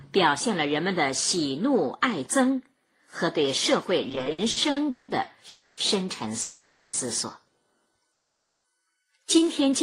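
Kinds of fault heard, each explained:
Repeated stalls (stutter): Between 4.09 and 5.10 s the jitter buffer kept running dry, giving 11 short hitches where the last sound is stretched over. Together they fill 430 ms, the longest 180 ms, so the passage drags and jerks rather than stopping once.
Call audio freeze: Single longer halts at 5.48 s (290 ms), 6.41 s (520 ms) and 8.12 s (520 ms). The last sound hangs on and fades without dropping to silence, then resumes where it stopped, likely because packets were held up in transit.
Jitter buffer slow-down: From 9.13 to 9.46 s the sound runs at about 85% speed, with 56 ms added by repeating tiny pitch-period pieces. The pitch stays the same and nothing stalls, so this is a smooth drawl rather than a hitch or freeze.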